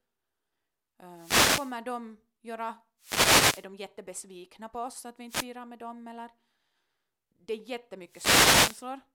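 At 1.11–1.80 s, 2.99–3.68 s, 5.28–5.46 s and 8.06–8.89 s the speech is hit by short swishes of static: wireless microphone noise hits. Multipath reflections cancel the FM radio signal, so receiver noise rises over the voice.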